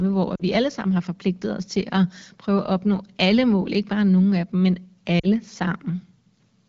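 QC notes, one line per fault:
0.35–0.43 s, lost AMR speech frames: just before "alle sammen har forpligtet" the speech briefly smears and dips for about 40 ms, which fits two consecutive frames failing their checksum. The wideband decoder fills the gap by repeating the last good pitch and vocal tract settings at lowered gain, then recovers with a moment of weak onset.
5.19–5.27 s, lost AMR speech frames: right after "nogle af dem men" a similar 40 ms concealment gap gives a short fade toward near silence before decoding resumes with the voice briefly weak or rough. The surrounding audio has the light coloration of AMR-WB, likely at 12.65 kbit/s.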